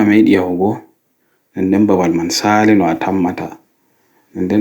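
No technical faults can be heard anywhere in this recording.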